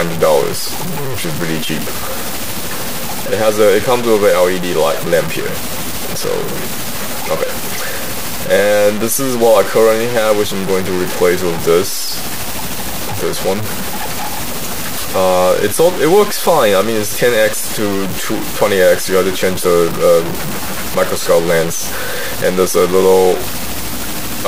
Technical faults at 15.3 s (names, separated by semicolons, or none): low bit depth without dither